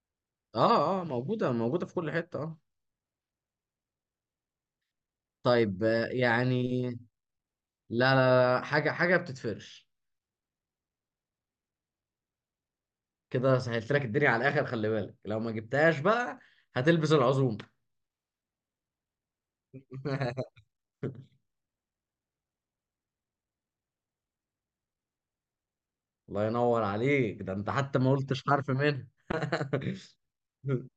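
Listening to this speech recording, nothing stood out as a technical problem at any point.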